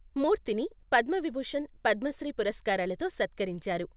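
Right from the start there's clock drift between sender and receiver: the sending end runs about 5 percent fast, so the jitter buffer keeps overfilling. That forces repeated timing corrections from 0.00 to 3.90 s, small cuts that squeeze the speech to about 105 percent speed. Everything sits under 4 kHz, which fits G.711 A-law telephone-band coding.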